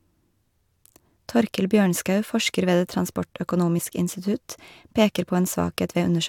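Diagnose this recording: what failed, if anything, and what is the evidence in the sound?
The failure sits in the codec stage: damaged data in a compressed stream. At 3.78 s a brief glitch of about 18 ms cuts across the speech, right before "institutt peker". Corrupted bytes in the encoded file made the decoder misread a frame, lose sync and hunt for the next valid frame header, so the audio briefly broke up. The fault lies in bad data in the encoded file itself, which sets it apart from a clean dropout or a buffer underrun.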